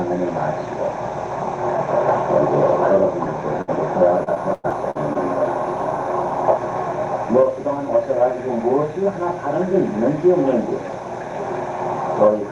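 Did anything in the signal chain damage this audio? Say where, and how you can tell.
Yes. At 3.61 to 3.70 s the sound briefly holds and fades, then jumps ahead. This is a burst of packet loss on the network: about 60 ms was lost and concealed by extending the last sound.

From 4.24 to 5.17 s the audio turns choppy, with pieces missing. This is repeated packet loss (robotic sound) on the network: six gaps, the longest 101 ms, about 200 ms lost in total.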